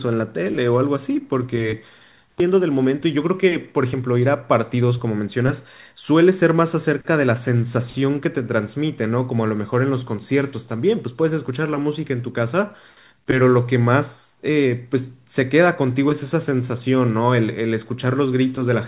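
At 2.40 to 2.42 s there is a skip ahead. Later speech was already queued when a stretch of audio was discarded, either lost in transit or thrown out by an overflowing jitter buffer. Roughly seven tenths of a second of speech never reaches the listener, and nothing fills the gap: the speech before and after the jump is spliced almost directly, so the sentence suddenly leaps forward mid-flow and the call delay shortens by the same amount.

Right after the jump, the jitter buffer still held more audio than its target and began a jitter buffer speed-up, from 2.49 to 4.19 s and again from 4.74 to 5.48 s. The receiver repeatedly cut out short slices, each one or a few pitch periods long, so the speech plays at 109% speed with its pitch unchanged. The first run trims around 150 ms and the second around 70 ms. Through this narrowband G.711 A-law path, with nothing above 4 kHz, those two stretches sound hurried.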